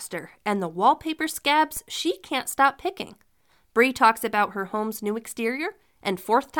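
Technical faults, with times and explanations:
1.77 s, DC step: right after "and the wallpaper" and just before "she can't stop picking", the waveform's zero line suddenly jumps by about -30 dBFS. That instant shift in offset comes through as a short low thump, while the speech itself carries on untouched. The offset doesn't hold. It bleeds away the way a 20 Hz high-pass would drain it, so you get the one knock and the baseline settles back.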